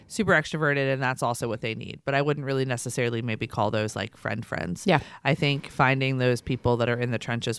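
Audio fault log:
Nothing stood out on listening to this speech recording.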